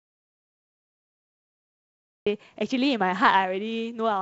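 From the very start until 2.26 s the speech is missing entirely. This is an audio dropout to silence, most likely a lost input that the recorder kept filling with silence. It is already under way when the clip begins, and speech then enters abruptly mid-flow. What sets it apart from a noise gate or a quiet pause is that the gap carries no room tone or hiss at all, just silence. Once sound returns, the G.722 wideband telephone coding at 56 kbit/s adds a light hiss in the upper band and some extra noise in the lower band.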